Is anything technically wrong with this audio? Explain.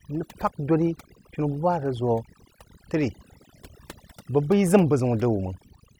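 Yes. Throughout the speech there is overdone noise removal. A noise reduction stage set far too aggressively compares each frequency band against its picture of the background noise and mutes any band that comes close. Because the softer parts of the speech sit near that threshold, they get stripped out along with the noise. The gaps between phrases drop to an unnatural hush dotted with small glittering chirps.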